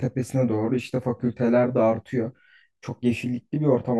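Throughout the speech, channel delay (comb filtering): one channel lags by roughly 20 ms before mono summing, cutting evenly spaced notches from around 20 Hz upward, giving a rough, slightly doubled sound.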